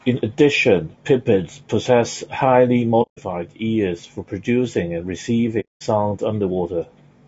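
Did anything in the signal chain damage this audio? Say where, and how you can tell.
Yes. Throughout the clip the speech sounds rough and grainy, with a noisy haze between the harmonics and a thin, artificial top end. That points to the codec stage, likely low-delay AAC compression (AAC-ELD), whose short frames resolve harmonics poorly at a bitrate around 32 kbps.

There are two short, soft-edged dropouts where the speech fades to silence and back: about 150 ms from 3.02 to 3.19 s, just before "ears for producing and", and about 210 ms from 5.60 to 5.83 s, just after "ears for producing and". This is AAC frame loss with muting in transmission. The decoder zeroed the missing frames, and the overlapping windows taper the edges. The gaps fit roughly five and seven lost frames.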